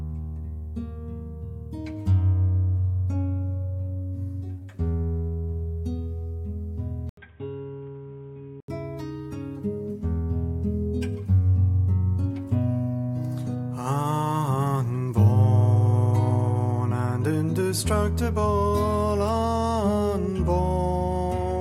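At 7.09 s a brief gap of about 80 ms breaks the sound. Until 8.68 s it turns dull and boxy, with nothing above 3.8 kHz. It is a little quieter, over faint new background noise. The input likely switched to a poorer device.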